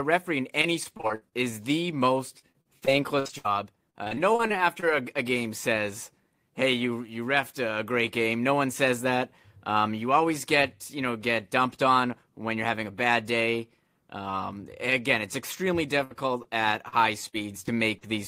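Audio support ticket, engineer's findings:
Repeated packet loss (robotic sound) at 0.61–1.34 s, 2.30–3.46 s after "is the", 3.90–4.84 s before "a a game says", and 16.88–18.04 s. Choppy speech. Spectrogram shows repeated smeared, stretched harmonic blocks up to about 60 ms each. Jitter buffer concealment is patching frequent gaps.

Burst of packet loss at 16.04–16.12 s, after "again it's extremely". About 60 ms of speech is replaced by a held, fading continuation of the last sound. Waveform shows a decaying continuation, then a jump forward. Receiver concealment follows a multi-packet drop.

Short concealed packet loss at 16.42–16.46 s. Brief 20 ms smear or wobble. Spectrogram shows a thin vertical blur where the decoder extrapolated the last frame and cross-faded back to real audio.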